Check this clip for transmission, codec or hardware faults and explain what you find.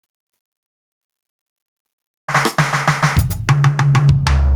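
There is one fault, gain pumping, present across the whole music clip. The level is pulled down by about 10 dB under each loud hit, squashing dynamics. The likely cause is input gain set too high, with a fast limiter clamping every peak. On a waveform the envelope looks flattened.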